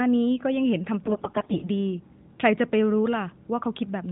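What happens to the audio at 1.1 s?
The speech turns hoarse, scratchy and gargly from about 1.04 s to 1.70 s, though it keeps roughly its pitch and loudness. These are AMR bit errors. On a poor link, roughly one in seven of the less-protected bits across 30 AMR-NB frames was corrupted while the check on the key bits still passed. The excitation pulses were misplaced and the fine pitch, gain and spectral values distorted, all within the codec's 4 kHz narrowband limit.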